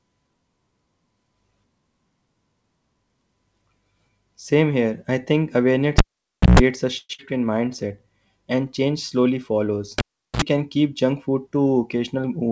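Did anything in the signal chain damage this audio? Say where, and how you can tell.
Yes. Analogue wiring: a cable was pulled and plugged in twice, at 5.98 to 6.59 s and 9.98 to 10.42 s. Each shows a pop, near silence for 0.56 s and 0.39 s, then 60 Hz mains buzz for 0.14 s and 0.06 s as the tip made contact, and a second pop.

Network stage: a long network dropout at 6.98 to 7.20 s. The speech smears into a fading buzz for about 0.2 s, then 20 ms of silence. About 100 ms of audio never returns. This is likely a delayed packet run, with the buffer delay shifting by around 70 ms.

Jitter buffer: a slow-down at 7.45 to 7.88 s. Speech drags to 89% speed at unchanged pitch, with stretched sounds. The receiver repeated pitch periods, adding 54 ms, to rebuild its reserve.

Jitter buffer: a speed-up at 11.59 to 12.50 s. Speech runs at 109% speed, hurried but at the same pitch. Short pitch-period slices, about a tenth of a second in total, were cut to shed excess delay.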